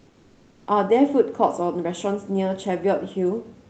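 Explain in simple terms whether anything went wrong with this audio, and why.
For the first 0.67 seconds, before the speech begins, the background is a smooth, even hiss that sounds a little quieter and flatter than the real room noise that follows. This is comfort noise in place of the background. The likely cause is the call's sending side pausing its audio while it detected no speech, with the receiving end filling that gap with made-up noise shaped roughly like the room. That is why the small details of the real background are missing until the talking starts.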